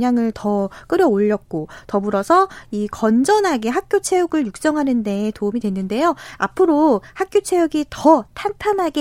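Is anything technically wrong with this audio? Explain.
No, nothing technically wrong can be heard here.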